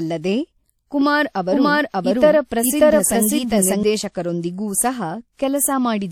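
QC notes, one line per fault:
1.01–3.83 s, doubled audio track: the speech is likely being picked up a second time through a slower path, or an edit is holding two copies out of step, so a full-band copy at roughly equal level trails by about half a second, dry, starting and stopping abruptly.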